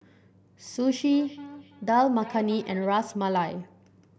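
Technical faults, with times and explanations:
0.97–2.94 s, feedback echo between two devices: speech returns about every 300 ms, thinner and ringing, peaking about 19 dB below; another device's playback re-enters this microphone.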